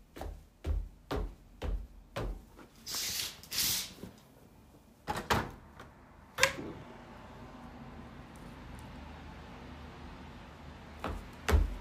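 At 1.47 s there is a click with a brief buzzy edge, over almost as soon as it starts. This is a repeated buffer. New audio did not reach the device in time, so it played its last block again three more times. Each block is only about 1.33 ms, which fits a 64-sample buffer, so the hard joins between repeats run together into a click rather than an audible stutter. Essentially no audio is lost.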